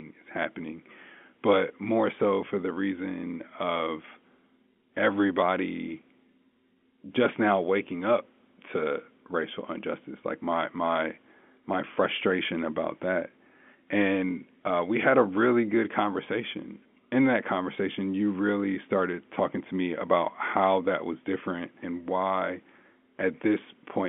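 No faults detected in the speech; the G.711 telephone coding path is working as intended, with the line band running from 200 Hz to 3.4 kHz and codec damage at most faint.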